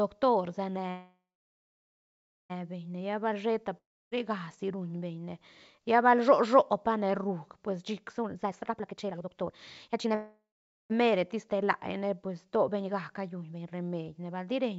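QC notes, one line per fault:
0.90 to 2.52 s, call audio freeze: sound stalls into a fading buzz, then about 1.3 s of silence, and resumes where it left off, likely late packets draining the jitter buffer.
3.77 to 4.13 s, long network dropout: short fading hiss, then about 0.3 s of silence, and the audio picks up further on with roughly a third of a second gone, likely lost packets.
8.22 to 10.14 s, jitter buffer speed-up: speech runs hurried at about 155% pace with unchanged pitch, as tiny pitch-period slices get trimmed, roughly a second in total, to shed excess buffered delay.
10.15 to 10.92 s, call audio freeze: another stall with a fading buzz and about half a second of silence before carrying on intact, likely packets held up again.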